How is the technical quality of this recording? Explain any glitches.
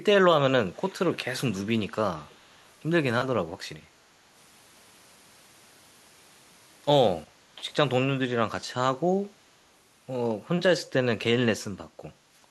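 The recording has echo leak in its first few seconds, at 0.77 to 0.94 s, 1.11 to 1.17 s, 1.52 to 1.56 s and 2.27 to 2.62 s. The far end is likely on a loudspeaker whose echo canceller let part of the returned signal through. That leaves a faint copy of the speech trailing it by 395 ms, in brief scraps. It starts roughly 20 dB below the speech and sinks to around 35 dB below by the last occurrence.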